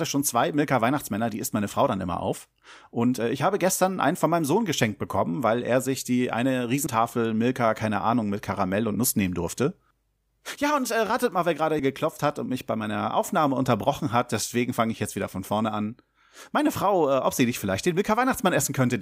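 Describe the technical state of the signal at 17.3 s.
At 17.3 s the signal is intact, with no audible technical fault at that moment.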